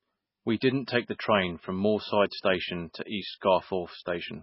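Throughout, heavy MP3 compression, likely at a very low bitrate around 16 kbps, removes everything above 5.5 kHz and leaves a watery, swirling texture with smeared consonants. At 0.60 s, pre-echo puts about 14 ms of hiss ahead of a sharp onset, because the block's quantisation noise spreads into the quiet moment before it.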